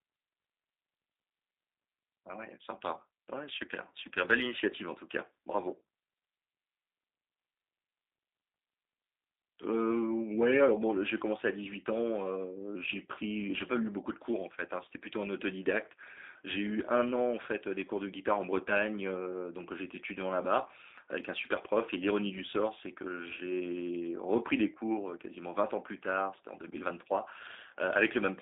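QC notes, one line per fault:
Throughout, G.729 codec: the speech sounds thin, boxy and slightly rough, with a buzzy, synthetic edge and plainly audible artefacts. Nothing comes through below about 250 Hz or above about 3.7 kHz, giving a narrow telephone band. The cause is G.729A-style coding, which fits an 8 kbit/s stream: each 10 ms frame is rebuilt from a vocal tract filter, a pitch predictor and a few pulses, discarding fine detail.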